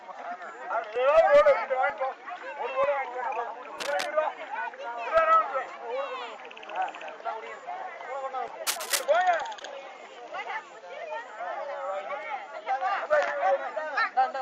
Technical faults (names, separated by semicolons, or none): cable scratch noise; short concealed packet loss